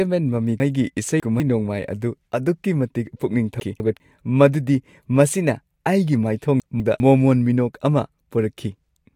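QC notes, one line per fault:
0.6–1.4 s, 3.6–4.0 s and 6.6–7.0 s, chunks out of order: jumbled, garbled sound. A 200 ms chunk plays late, three chunks late in the first span and one in the others, so nothing is lost but the order breaks, leaving hard joins.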